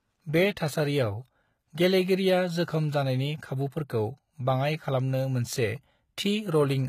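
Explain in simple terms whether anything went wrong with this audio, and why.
Something did go wrong, and it runs the whole length of the speech. The s sounds and other hissy consonants come across gritty and metallic, almost lispy, and nothing at all gets through above about 14.9 kHz. That points to HE-AAC compression as the likely cause. The codec keeps only the lower part of the sound properly and fakes the treble by copying lower bands upward, so the sparkle is there but never quite matches the real thing.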